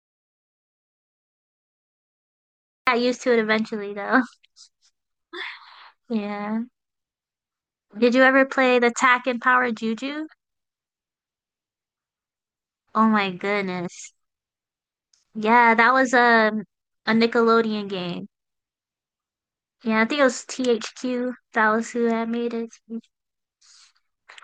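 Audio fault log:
0.00–2.87 s, audio dropout to silence: the clip opens already dead, with silence and no room tone at all, then the speech cuts in mid-flow. Likely the input was disconnected or muted while the recorder kept writing silence, so that opening stretch is simply gone.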